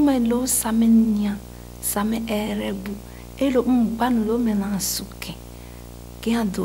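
A video or display buzz runs through the whole speech clip. A screen or video cable is coupling into the audio path. It sounds like a 59.94 Hz buzz with hash above it, plus a thin 15.7 kHz whine, roughly 15 dB below the speech.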